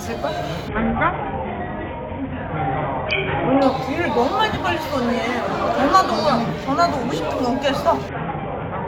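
From 0.68 to 3.62 s and again from 8.09 s to the end, the treble turns dull and a gritty noise rises, the sign of a Bluetooth SBC bit pool drop: the link, which fits a bit pool falling from 31 to 5 (about 50 kbps), starved the top sub-bands.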